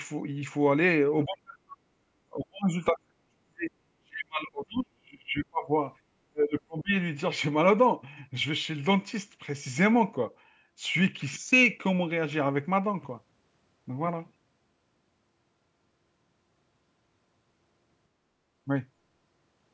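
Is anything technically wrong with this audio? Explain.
Yes. Speech suppressed in double talk appears at 1.25–1.81, 2.28–3.72, 3.98–5.71 and 6.29–6.95 s. The speech sinks by around 30 to 40 dB. This is likely an echo canceller failing to separate this side's talker from the loudspeaker echo during overlapping talk and turning both down. The fades are level-driven rather than clean network dropouts.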